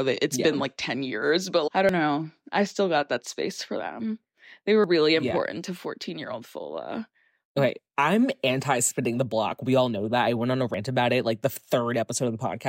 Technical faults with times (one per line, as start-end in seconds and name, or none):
1.89 audio missing between chunks
4.84 audio missing between chunks
10.74 audio missing between chunks